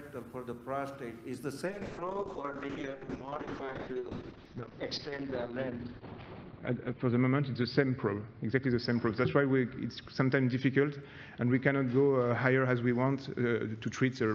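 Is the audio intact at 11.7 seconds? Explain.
No. A call bitrate drop runs from 1.66 s to the end of the clip. The encoder's budget fell from 40 to 6 kbps, so it codes coarsely and limits the band from 20 kHz to 6 kHz. The sound is muffled and rough.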